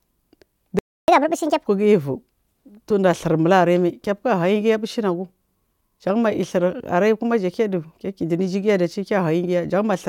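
A playback stall cuts in at 0.79 s: the speech drops out in mid-flow and the output stays silent for about 0.29 s, until 1.08 s. The most likely cause is that the player's buffer ran dry, or its playback thread was held up, so it had nothing to send to the output.

Catch-up at higher speed follows straight on, from 1.08 s to 1.67 s. To recover the time lost in the gap, the player resamples its backlog and runs it at 1.5 times normal speed. Because resampling changes speed and pitch together, the speech comes out noticeably hurried and raised by around seven semitones, giving a brief chipmunk-like quality, before dropping back to normal rate and pitch at 1.67 s.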